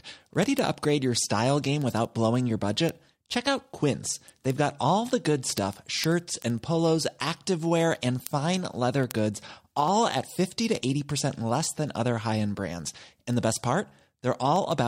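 From 0.13 s to 14.87 s the speech carries word clock ticks, some two hundred sharp clicks of uneven strength at roughly 70 ms intervals. The receiving clock drifts around 300 ppm from the sender's, so each slip drops or repeats one sample.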